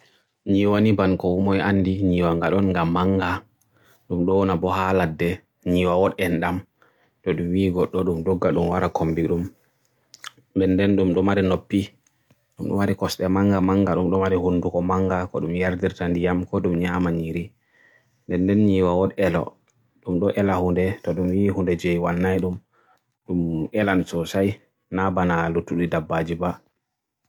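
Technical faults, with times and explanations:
No technical faults are audible anywhere in this recording.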